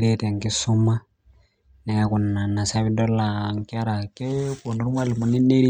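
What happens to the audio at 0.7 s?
Nothing goes wrong at 0.7 s; the speech carries on intact through that moment.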